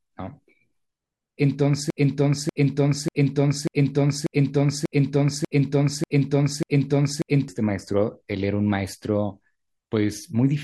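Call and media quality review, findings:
Broken-record loop, 1.90 to 7.48 s: one 0.59 s speech fragment repeats back to back 9 times. Likely cause a stalled player, encoder or stream re-sending its last held buffer. The speech belonging to that span is lost.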